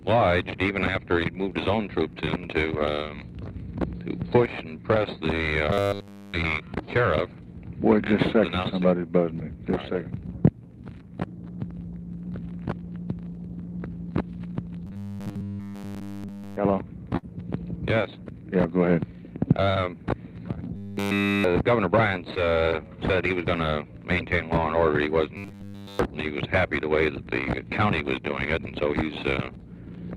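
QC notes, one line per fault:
2.25–2.29 s and 22.35–22.45 s, short concealed packet loss: each spot has a brief smear or wobble where the sound loses its edge for an instant. Roughly 20 ms of audio never arrived in time. The receiver stretched the preceding sound over the hole, about 13 ms and 12 ms of invented fill, and blended back. At 22.35 s the patch also adds about 10 ms, so the timing slips slightly.
5.71–6.34 s, 14.87–16.57 s, 20.76–21.48 s, 25.37–25.99 s, robotic sound from repeated short buffers: across each whole stretch the sound turns into a rigid metallic buzz at 100 Hz that loosely tracks the original contour. The likely cause is fresh audio arriving too seldom, so the player loops the last fragment over and over. That fixed 100 Hz fits a 10 ms repeated buffer, while the real audio underneath is skipped.
17.17–17.25 s, burst of packet loss: a held buzz or fading hiss replaces the sound, and then the audio jumps ahead with material missing. 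About 60 ms in a row was lost, longer than a single dropout. The receiver filled roughly 59 ms by continuing the last sound and turning it down as the gap went on, then resumed past the lost part. The Opus call path at 32 kbps, with its 12 kHz bandwidth, carries this along with the other faults.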